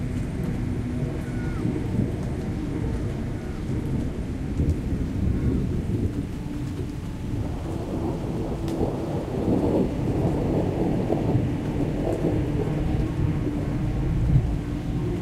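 From 4.60 s to the end, a crude rate conversion, likely from 44.1 to 48 kHz by nearest-sample repeating, adds an inharmonic fizz about 40 dB down that tracks loud, bright passages.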